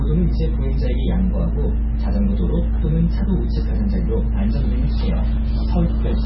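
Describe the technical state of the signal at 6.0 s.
Likely MP3 compression, present throughout including 6.0 s: treble is cut at 5.6 kHz and weak components flicker between frames, sounding watery and swirly, which fits roughly 16 kbps.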